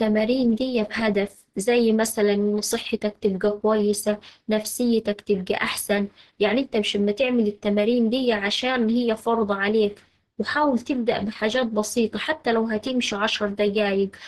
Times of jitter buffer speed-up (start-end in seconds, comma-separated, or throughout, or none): none